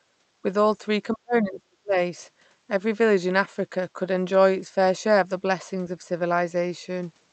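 From 1.13 to 1.96 s the speech gets hammered down, dropping by about 40 dB at worst and chopping out for most of that stretch. That's likely speech suppressed in double talk: the echo canceller mistook the talker for loudspeaker echo and ducked everything.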